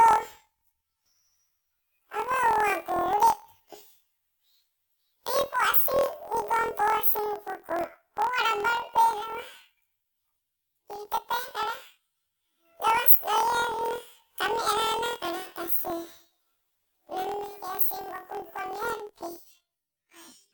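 From start to finish the speech sounds an octave high, with a rough, robotic buzz at about 41.7 Hz. This is planar audio read as interleaved: each 24 ms block of left-then-right samples plays back as two half-length, double-speed bursts.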